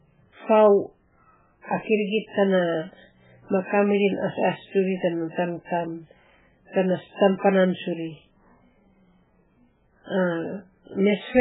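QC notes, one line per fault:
Throughout, MP3 compression: heavy damage across the speech, with nothing above 3.8 kHz and a watery, swirling texture. This is likely MP3 encoding at a bitrate as low as 8 kbps, which drops the treble and zeroes weak frequency lines that flicker between frames.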